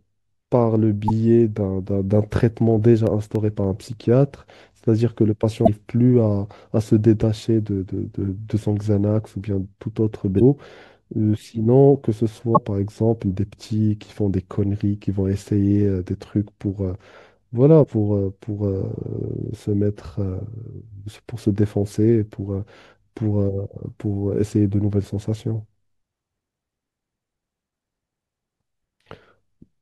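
At 1.08 to 1.10 s the speech breaks up briefly where damaged data in a compressed stream has reached the decoder. Bytes in that stretch were lost or overwritten, so the decoder misreads the frame, loses its place, and hunts for the next valid frame header. The same fault returns at 5.63 to 5.69 s, 10.36 to 10.42 s, 12.53 to 12.59 s and 17.80 to 17.85 s. Each burst lasts roughly 25 to 60 ms and arrives at irregular moments.

Between 2.50 and 3.93 s there are six CD scratch ticks. A blemish on the disc wipes out more data than the error correction can rebuild, once per revolution, and the player fills or mutes those samples. Each tick is a dry click well under two milliseconds long, and they fall at a steady rhythm of about four per second. That tiny, evenly spaced click is what sets them apart from the longer, irregularly timed bursts of the corrupted stream.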